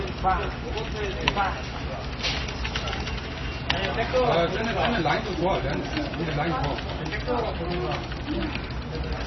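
From start to finish, the audio carries heavy damage that is likely from MP3 compression, at a bitrate that points to roughly 24 kbps. Short of bits, the encoder discards everything above 5.9 kHz and zeroes weak frequency lines, which flicker on and off between frames. The result sounds dull, watery and swirling, with smeared attacks. On a spectrogram the energy stops at a hard ceiling near 5.9 kHz, and the region below it is broken into isolated, blinking patches.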